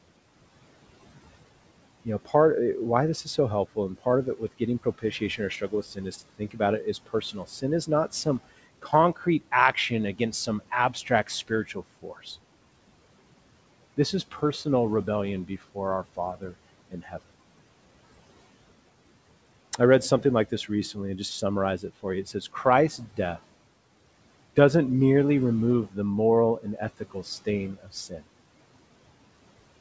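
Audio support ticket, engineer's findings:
Noise suppressor artifacts, whole clip. Background pulled down by about 18 dB between phrases, rising under speech. Suppressor gating steady noise band by band, frame by frame. Audio band-limited at 8 kHz, consistent with the G.722 wideband path.

Speech cut by the noise suppressor. Swallowed, faint fragments at 2.05–2.34 s (before "eh why this", about 14 dB), 3.24–12.26 s (about 18 dB, roughly 1.5 s total), 15.48–17.29 s (about 18 dB), 21.79–23.19 s (after "and just", about 11 dB), 26.61–28.21 s (after "the moral", about 15 dB). Suppressor misclassifying soft speech as noise.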